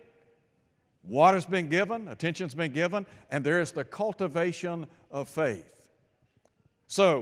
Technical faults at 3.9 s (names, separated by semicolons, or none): none